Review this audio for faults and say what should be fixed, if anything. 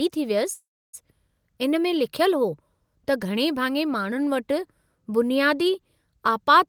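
A call audio freeze runs from 0.53 to 0.95 s. The sound stalls, then goes silent for 0.3 s. Likely delayed packets emptied the jitter buffer. Playback resumes late, with nothing lost.

Prevention: monitor network jitter and size the jitter buffer adaptively so brief delivery delays don't drain it.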